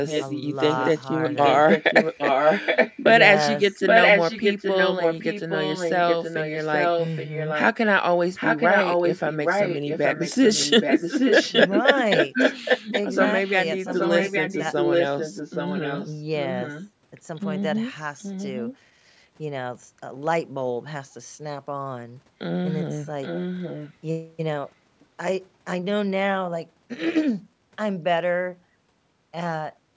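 This speech clip carries an echo leak. A delayed copy of the speech trails the original by about 0.82 s. It appears at 0.06–0.42, 0.76–3.05, 3.71–7.71, 8.16–13.51, 13.88–16.89, 18.18–18.77 and 23.22–23.94 s. From 0.76 to 13.51 s the echo is roughly as loud as the speech. Later it is quieter, and faint around 18.2 s. The likely cause is a far-end loudspeaker whose echo canceller failed to remove the returned sound.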